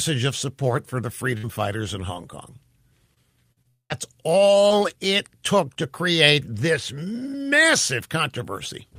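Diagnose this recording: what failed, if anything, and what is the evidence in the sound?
The fault is at the network stage: scattered short gaps between 1.37 and 5.78 s. About seven packets went missing or arrived too late, each leaving a small hole in the speech. The receiver filled each one by extending the sound just before it. The longest hole is around 50 ms. Concealment covers roughly 4% of that stretch. The speech stays clear. Each patch is heard as a brief tick, smear or hiccup.

A long network dropout occurs within that stretch, from 3.68 to 3.92 s. The network is the likely cause. About 220 ms of speech never arrived. The receiver carried the last sound forward for about 216 ms. It is heard as a buzz or hiss that fades out. About 130 ms of near-silence follows it. The speech then resumes at 3.92 s. The lost portion is gone, not delayed, so the sound jumps ahead at that point.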